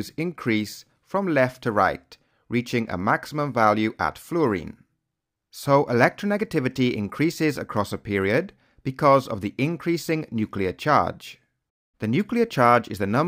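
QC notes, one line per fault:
No faults heard in this clip. Nothing in the audio calls for a QC note.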